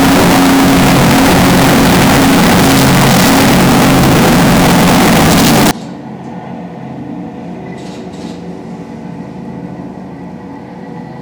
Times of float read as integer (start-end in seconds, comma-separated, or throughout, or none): 0.00-5.71